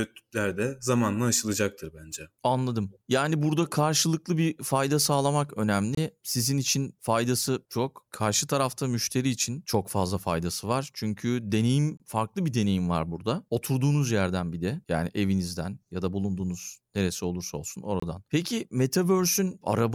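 At 5.95 to 5.97 s, 11.97 to 12.00 s and 18.00 to 18.02 s the speech drops into a hard-edged 25 ms hole. That's a gap between chunks: the audio comes in 6-second pieces, each join leaves a sliver of silence, and the flow stutters regularly.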